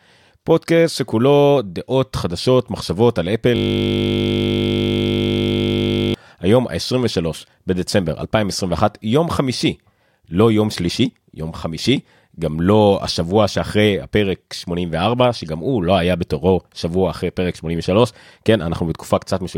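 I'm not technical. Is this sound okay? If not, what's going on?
No. From 3.56 to 6.14 s there's a system hang loop. The computer froze and kept repeating one 20 ms scrap, so you hear a steady buzz.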